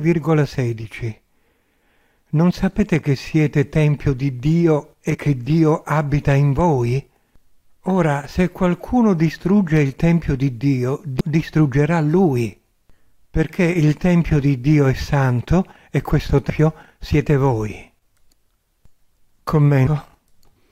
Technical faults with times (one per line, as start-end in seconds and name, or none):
2.79 damaged data in a compressed stream
5.13-5.16 damaged data in a compressed stream
11.19 damaged data in a compressed stream
16.49 damaged data in a compressed stream
19.85 damaged data in a compressed stream